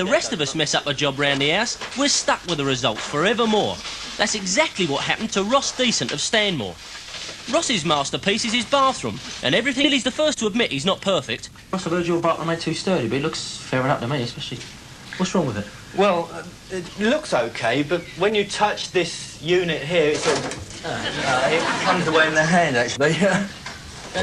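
A stretch of audio was dropped at 9.84 s while later material was already queued, a skip ahead. Playback leaps forward with no gap and no fill, so about a second and a half of sound is simply missing, and the material on either side of 9.84 s is butted together almost seamlessly. The result is an abrupt content jump rather than a dropout or a silence. Straight afterwards the jitter buffer was holding more audio than its target and began trimming it back, a jitter buffer speed-up. It repeatedly cut out short slices, each one or a few pitch periods long. From 10.03 s to 13.25 s the audio runs at 110% speed, shedding about 0.3 s in total. From 13.74 s to 15.22 s it runs at 105%, losing roughly a tenth of a second. Pitch stays unchanged throughout, but both stretches sound hurried, with the first more noticeably rushed than the second.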